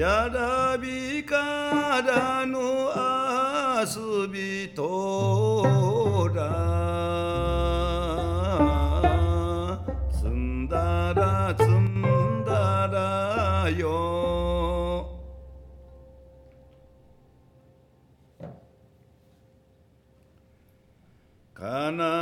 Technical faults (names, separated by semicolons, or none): one channel drops out